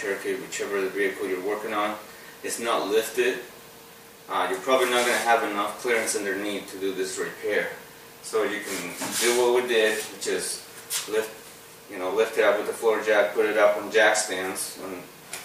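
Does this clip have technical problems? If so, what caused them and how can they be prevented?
No, nothing in the signal points to a technical fault, so there is no cause to trace and no corrective step to take.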